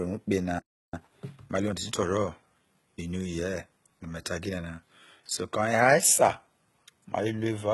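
It's a speech clip with heavy compression damage the whole way through: gritty treble with nothing above 11.8 kHz, most likely HE-AAC compression at a very low bitrate, somewhere around 16 kbps. At 0.59 s, right after "ukpe na", there's a playback stall where the sound just drops out for about 340 ms until 0.94 s, likely the player running short of data. From 0.94 s to 3.2 s you get time-compressed catch-up, with the speech hurried along at about 1.15 times speed with pitch unchanged, as the player trims its backlog.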